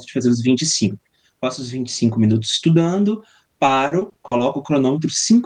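From 3.65 to 4.41 s, the speech breaks up with repeated packet loss, giving a robotic sound. Audio arrived missing or late again and again. Each hole was covered by stretching the last bit of sound forward. About seven holes fall in this stretch, none longer than 40 ms. Together they patch about 180 ms, roughly a quarter of the span. The speech turns choppy, with small pieces gone.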